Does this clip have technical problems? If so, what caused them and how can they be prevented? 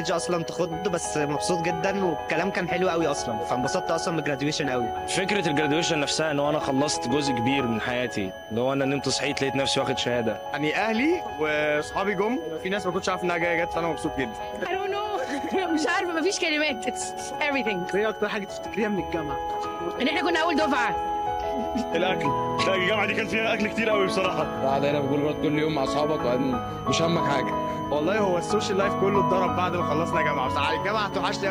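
Yes. A switching supply whistle runs through the entire clip: a thin high tone near 3 kHz that wanders between about 3.02 and 3.07 kHz, sitting roughly 25 dB below the wanted signal. A switch-mode power supply feeding the recording chain is cycling at an audible rate, or two supplies are beating against each other, and the resulting ripple leaks into the audio path. Its pitch shifts slightly as the supply's load varies. Preventing it means powering the recording gear from a linear or well-filtered supply, or replacing the noisy adapter with one that switches far above the audible range.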